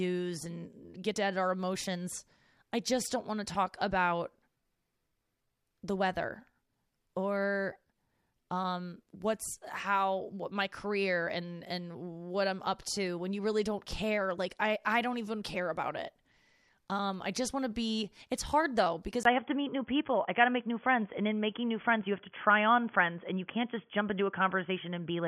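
At 19.23 s, right after "hard though because", a 20 ms gap opens and the speech turns boxy and dull until the end, likely an input switched to a poorer device. A spectrogram shows everything above 3.4 kHz cut off, the level shifts by about 5 dB, and a faint new noise floor appears.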